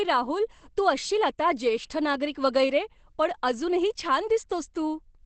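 Throughout the speech the sound is muffled and hoarse, with nothing above 8.5 kHz, which points to Opus compression, likely at a low rate around 12 kbps in its speech mode. Unlike MP3 damage, there is less swirling, though the codec damage is heavy.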